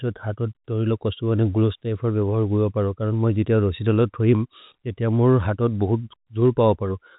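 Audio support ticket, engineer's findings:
Nothing stood out on listening to the speech, which comes across as ordinary G.711 telephone-band audio with nothing above about 3.8 kHz.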